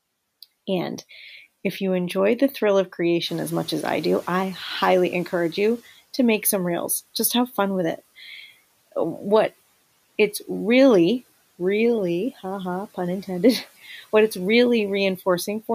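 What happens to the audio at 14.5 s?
Nothing goes wrong at 14.5 s; the speech carries on intact there, with the room's background noise sitting about 27 dB below it as part of the recording.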